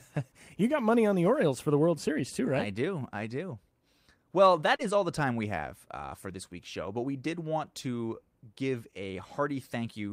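At 4.75 to 4.82 s, just before "all the time we", the speech briefly smears and wobbles. This is short concealed packet loss: about 40 ms of audio arrived too late, and the receiver papered over the gap by extending the preceding sound before blending back in.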